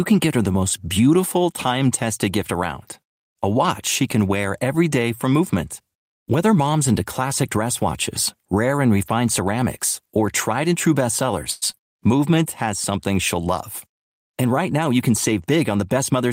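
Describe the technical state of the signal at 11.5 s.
At 11.51 to 11.64 s, right after "or tried and true", there is a call audio freeze. Packets were likely held up and the jitter buffer ran dry, so the receiver stretched the last sound into a fading buzz or hiss lasting about 104 ms. Nothing is lost; the speech resumes where it stopped, now about 104 ms late. On a spectrogram this appears as frozen horizontal streaks with no silent gap, and the waveform shows a repeating, decaying pattern.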